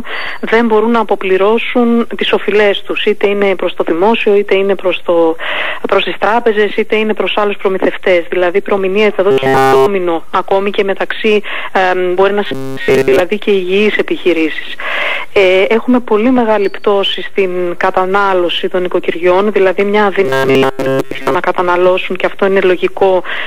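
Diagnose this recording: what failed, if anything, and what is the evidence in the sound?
A rigid, metallic 134 Hz buzz wholly, then mostly, replaces the sound at 9.31–9.86 s, 12.46–13.20 s and 20.25–21.35 s: robotic sound from repeated short buffers, likely a starved driver buffer looping about 7.5 ms.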